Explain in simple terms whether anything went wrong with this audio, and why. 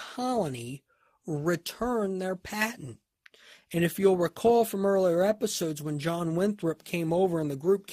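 Clock drift between sender and receiver: the device that recorded and sent this speech kept time about one percent more slowly than the device playing it back. Because of that mismatch, audio arrives slightly too slowly for the receiver, and its waiting store of sound keeps running low throughout the clip. Nothing breaks outright, but the two ends never quite stay in step, so the receiver has to keep patching the gap.

Repeated timing corrections: from 0.20 s to 6.99 s, the receiver quietly repeats tiny slivers of audio to fill in for the slow sender. Together these add roughly 70 ms, and the speech plays at about 99% of its proper pace. Each patch is small and falls at uneven moments, so the effect is faint: slight hiccups or a gently unsteady rhythm rather than obvious gaps.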